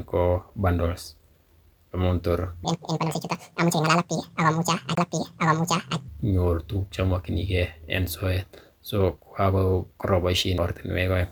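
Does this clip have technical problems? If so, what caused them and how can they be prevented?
Yes. From 2.65 to 6.08 s the speech plays at the wrong speed, 1.79 times too fast. Pitch rises together with tempo, about 10 semitones, so the voice turns high and hurried. The likely cause is playback or editing locked to the wrong clock. Checking clock and sample-rate settings before export prevents this.

Two CD skips occur. At 4.95 to 4.97 s the sound mutes for around 20 ms, then resumes elsewhere. At 10.58 s a shorter mute of a few milliseconds does the same. The laser jumped tracks on the spiral. Ripping with an error-checking drive and a clean, steady disc prevents it.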